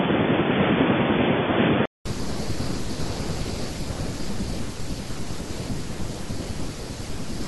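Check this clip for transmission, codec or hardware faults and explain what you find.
One input fault is present. From 0.00 to 2.06 s the speech is band-limited, with nothing above 3.5 kHz, a faint separate noise floor and a level a few dB different. It then clears after a 200 ms silence, likely an input switched to a poorer device.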